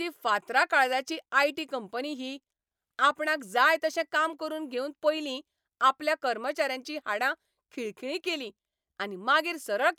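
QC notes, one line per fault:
No fault found in this speech clip.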